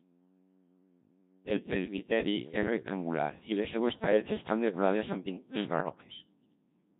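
Throughout, the speech passes through a Codec 2 vocoder at 1.3 kbit/s. Only pitch, voicing, energy and a spectral envelope cross the link, and the decoder rebuilds the voice from sine waves, so the waveform itself is lost. The result is heavily robotic, buzzy speech.

From 5.80 to 5.98 s, bit errors on digital voice radio corrupt a short run of vocoder frames at an error rate of a few percent. Because each bit steers pitch, level or spectrum for a whole frame, the synthetic voice lurches into warbling, bleeping gibberish.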